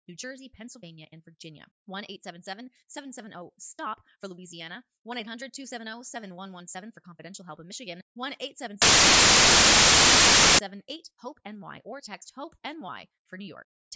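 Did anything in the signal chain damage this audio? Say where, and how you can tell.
Yes. From 8.82 s to 10.59 s the audio is replaced by a 1.77-second burst of very loud white noise with abrupt edges at both ends. This is file tags played as audio, a storage and playback fault: the player has read an embedded cover picture as if it were sample data. Compressed image data is statistically close to random bytes, so it decodes as flat, very loud noise rather than as anything with structure.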